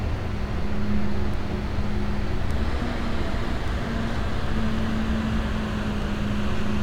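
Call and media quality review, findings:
Word clock ticks, 0.17 to 6.02 s: about seven sharp ticks of uneven strength, roughly one per second. Digital input not locked to the sender's clock, with an offset of tens of ppm, so single samples are slipped. Steady spacing rules out packet-loss clicks.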